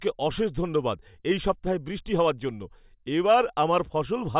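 Nothing in this recording stands out as a technical problem; the speech just runs along without any glitch or hiccup catching the ear.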